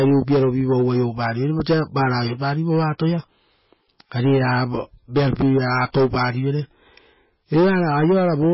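Throughout the speech, the sound is watery and swirly, with s sounds chirping and attacks smeared. This is likely MP3 compression, heavy enough to fit roughly 18 kbps. On a spectrogram, everything stops at a flat 5.5 kHz ceiling, and weak detail below it flickers on and off in blocky patches.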